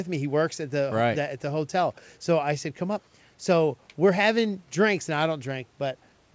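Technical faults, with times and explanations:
The speech passes through call microphone processing and a G.722 call path with the usual bass trimming and codec band limit, leaving nothing above 8 kHz, and no technical faults are present.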